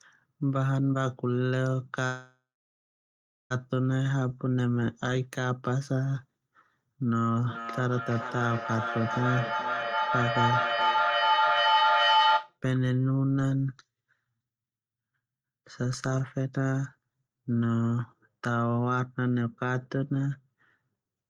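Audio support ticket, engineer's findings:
Call audio freeze, 2.05 to 3.52 s: sound smears into a fading buzz, then about 1.05 s of silence. Likely packet delay draining the jitter buffer; waveform shows a decaying tail, then a flat line.

Jitter buffer slow-down, 4.03 to 4.35 s: audio drawn out to 88% speed, 46 ms added, pitch unchanged. Spectrogram shows stretched harmonics repeating single periods.

Feedback howl, 7.09 to 12.58 s: microphone-to-loudspeaker loop between two devices in one room builds a tone near 1 kHz, peaking about 4 dB over speech, loop delay roughly 0.4 s. Spectrogram shows a bright horizontal line.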